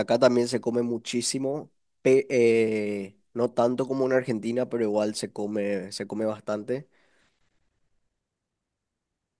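No technical faults are audible.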